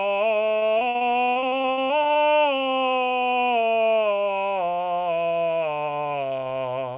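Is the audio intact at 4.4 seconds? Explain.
Yes, the music is intact at 4.4 seconds, with nothing breaking it there beyond the narrowband call path that leaves nothing above 4 kHz.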